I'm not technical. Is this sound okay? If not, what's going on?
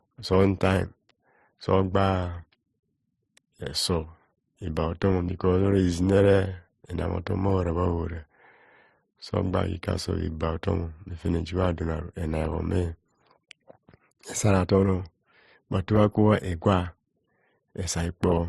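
No. Throughout, the speech has nothing above 12.2 kHz. This is likely transcoding between lossy codecs, with each compression adding its own damage.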